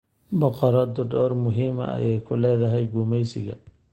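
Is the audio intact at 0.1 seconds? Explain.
Yes, at 0.1 seconds the speech is intact, with no dropout, click or other fault to be heard at that point.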